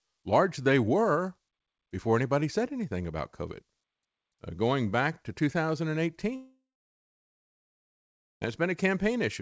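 From 6.36 s to 8.43 s the speech breaks off: this is most likely a long network dropout. About 2.06 s of audio never arrived. The receiver stretches the last sound into a brief fading buzz, then about 1.8 s of near-silence follows before the speech resumes with the gap simply gone. On a waveform this shows as a collapsed, nearly flat stretch. A spectrogram shows a short smeared tail trailing into a blank band, with everything sitting below the 8 kHz ceiling of the wideband call codec.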